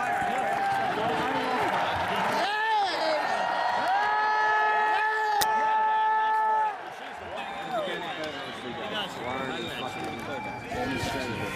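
Damaged data in a compressed stream causes five short blips, at 0.56, 3.00, 5.41 to 5.43, 7.36 and 10.71 s. Each lasts about 14 to 22 ms. Corrupted bytes make the decoder misread frames and lose sync. It glitches briefly while searching for the next valid frame header.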